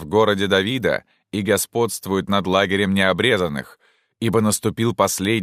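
No audible technical faults.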